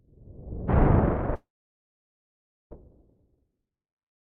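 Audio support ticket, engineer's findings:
Long network dropout, 1.35 to 2.73 s: last sound smeared into a fading buzz, then about 1.26 s of silence; resumes with about 1.36 s of audio skipped. Likely packet loss with receiver concealment. The decaying tail and lost content distinguish it from a plain mute.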